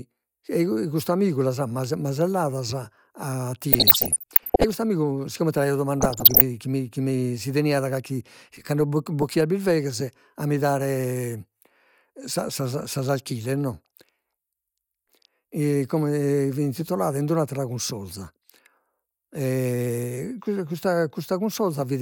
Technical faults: DAB burbling

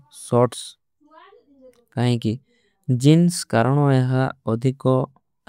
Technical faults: none

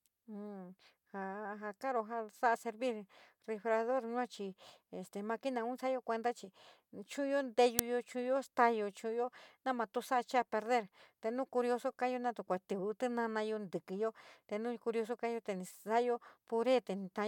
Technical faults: uninitialised buffer

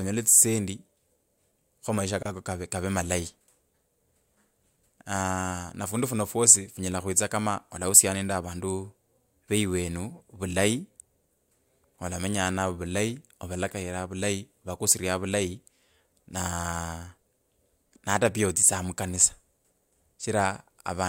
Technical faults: gap at a join of encoded pieces

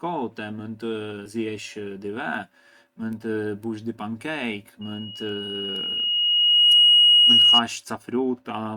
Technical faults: compressed frames skipped; loudspeaker feedback squeal

